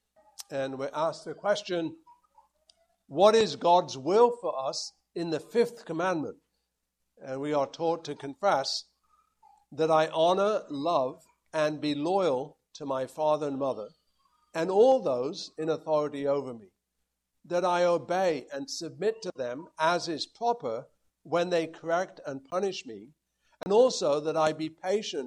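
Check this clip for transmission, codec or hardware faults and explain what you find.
Two blocks of digital silence: a tick at 22.51 s (about 15 ms) and a short hole from 23.63 to 23.66 s (30 ms). Each cuts abruptly to silence and back, most likely because the output buffer went unfilled.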